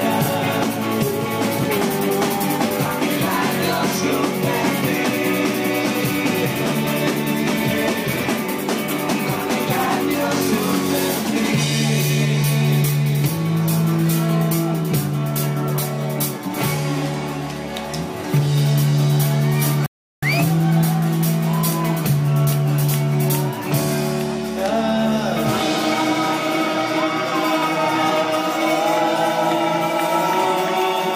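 A playback stall occurs from 19.86 to 20.23 s: the audio cuts to silence mid-flow for about 0.36 s, then continues. The likely cause is the player running out of buffered data or its output thread being blocked, so nothing reached the output until it recovered.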